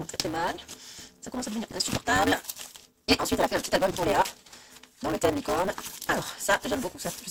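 Block size mismatch (truncated), present from start to finish: each block is longer than the next stage reads, so its tail is discarded. That leaves a buzz at 188 Hz, which fits a 256-sample read, and the audio runs 1.88 times fast at roughly normal pitch.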